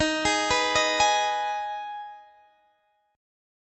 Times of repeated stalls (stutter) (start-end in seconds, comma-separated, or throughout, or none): 1.99-3.01